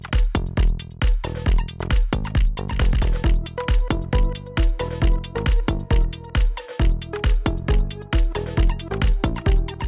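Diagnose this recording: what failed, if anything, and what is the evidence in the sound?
Nothing in the signal points to a failure at any stage of the chain: level, continuity and timing hold steady throughout, with no audible damage to diagnose.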